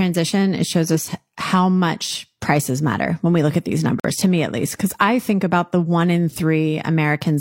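From 0.85 to 0.97 s, just before "how much prices matter", a fairly loud burst of garbled noise cuts across the speech. This is a corrupt frame decoded. Flipped bits in a few consecutive compressed frames were played anyway, so misread gains and codes scattered energy to the wrong frequencies for about 0.12 s. Unlike a muted frame, something unwanted is added, heard as a harsh chirp-like blip.

From 4.00 to 4.19 s, after "we look at these" and before "to me at least", the sound stops dead and resumes about 0.2 s later. This is a corrupt frame muted. The decoder rejected damaged frames and the player filled them with silence, leaving a hole that fits roughly four frame lengths. The gap starts abruptly, and the speech picks up on time.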